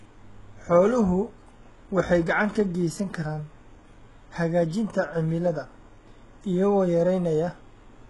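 HE-AAC compression, likely, runs throughout the speech: nothing survives above 11.5 kHz, and the treble is heavily damaged and synthetic. Upper bands seem copied from lower ones, so sibilants turn gritty and lispy, as a bitrate near 12 kbps would produce.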